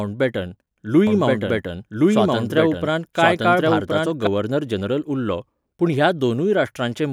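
From 1.07 s to 4.27 s the speech carries a doubled audio track: a second, full-band copy runs roughly a second behind the original at about the same level, so two overlapping lines of speech compete for attention. The late copy has no decay or room colour, and it cuts in and out abruptly at those boundaries. This is likely a second capture of the same signal through a slower path, or two misaligned copies left in an edit.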